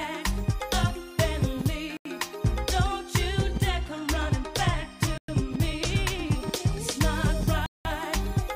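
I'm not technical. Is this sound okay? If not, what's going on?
No. Bluetooth stall at 1.97, 5.18 and 7.66 s: the sound drops to silence for about 0.09, 0.11 and 0.19 s, then resumes, likely because wireless interference briefly starved the headphones of audio.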